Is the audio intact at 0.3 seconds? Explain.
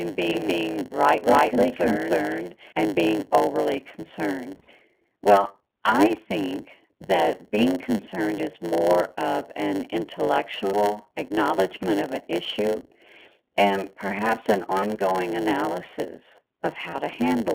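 No. At 0.3 s a doubled audio track is already under way from the clip's start and runs to 2.72 s, ending just before "and being overly". A second copy, about as loud, trails roughly 300 ms behind. It is likely an out-of-step edit or a slower second capture path. It is dry and full-band, and it stops abruptly.

The iLBC codec is also present. The band is held to 250 Hz to 3.5 kHz. Each 20 ms frame is coded on its own, which fits the 15.2 kbps mode. The sound is clear but rough and synthetic.

There is also a block size mismatch (padded). Each block ends in inserted silence. This gives a 100 Hz buzz, and the audio plays at about 0.92 times normal speed with its timbre unchanged.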